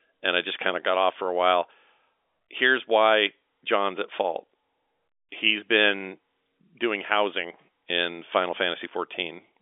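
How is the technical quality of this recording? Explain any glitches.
Nothing stood out on listening to this telephone-band speech, so there is nothing to explain.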